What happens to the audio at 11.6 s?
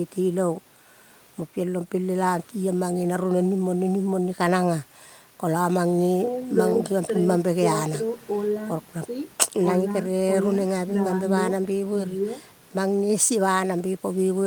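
Nothing goes wrong at 11.6 s; the speech carries on intact through that moment, with no dropout, click, distortion or other audible fault.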